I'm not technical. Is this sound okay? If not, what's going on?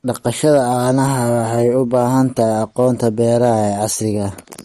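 No. Two things are wrong.

The recording was likely squeezed hard by MP3 compression, which throws away detail to make the file smaller. It stores only the parts it thinks you'll notice and drops the rest. Here that loss is plainly audible: the speech sounds watery and swirly, as if heard through moving water, and the highest treble, everything above about 13.9 kHz, is simply gone, so the sound lacks crispness.

There is also hard clipping at 0.44 to 0.58 s, 1.66 to 2.03 s and 2.80 to 3.84 s. In those stretches the signal was a little too loud for the equipment to handle, so the tops of the loudest moments were chopped off flat. That adds a rough crackle on the peaks of the speech. The overload is mild, so it sounds like brief grit on the louder parts rather than constant fuzz.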